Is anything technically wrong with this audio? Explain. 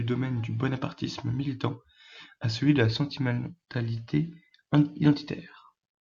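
No, nothing in this speech recording stood out as technically wrong on listening.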